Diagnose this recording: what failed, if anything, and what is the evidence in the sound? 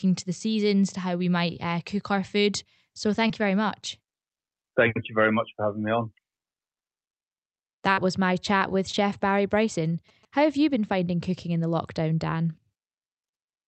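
Network stage: short concealed packet loss at 3.27–3.31 s, before "you very much", and 7.93–7.99 s, before "was my chat with". The decoder extended prior sound across roughly 20 ms and 40 ms gaps.

Analogue wiring: GSM signalling bursts from 8.91 to 10.25 s, after "was my chat with". A galloping string of 217 Hz buzzes, rectified radio pickup, sits about 30 dB below the speech.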